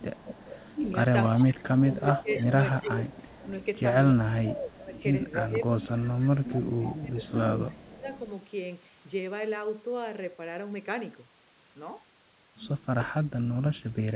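Echo leak runs from 0.0 to 1.32 s, 1.9 to 3.65 s, 4.94 to 5.34 s and 6.43 to 8.01 s: a faint copy of the talker returns 287 ms late, about 20 dB down, rising to about 15 dB down in the last stretch. This is likely a loudspeaker whose echo canceller let part of the microphone pickup back into the call.

Speech suppressed in double talk overlaps these echoes from 0.78 to 3.02 s and 4.12 to 8.06 s, then returns at 13.74 to 13.97 s. The voice dips by up to about 15 dB, and by about 20 dB in that final brief cut, for roughly a second, then two seconds, then a fraction of a second. The likely cause is the canceller ducking the near talker along with the echo while both sides spoke. Throughout, nothing sounds above 4 kHz, which fits a narrowband telephone codec such as G.711.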